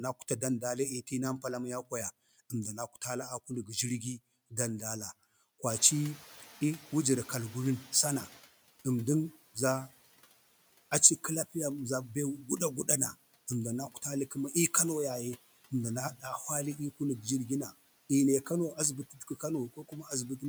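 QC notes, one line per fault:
5.69–8.42 s, noise suppressor catching up: the room noise jumps by about 15 dB near 5.5 s and the suppressor's noise estimate lags, so the noise comes through with less reduction at first, then sinks about 10 dB over 2.73 s. A spectrogram shows a brightened broadband floor fading gradually.
19.1–19.43 s and 19.74–20.11 s, speech cut by the noise suppressor: quiet speech was mistaken for the raised background and pulled down about 11 dB and 13 dB, over roughly 200 ms and 150 ms, so the sound turns swallowed. The waveform envelope dips and the spectrogram shows dimmed patches.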